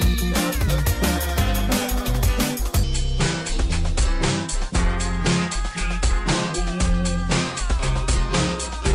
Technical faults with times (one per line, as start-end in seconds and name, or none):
2.83-8.94 section at the wrong speed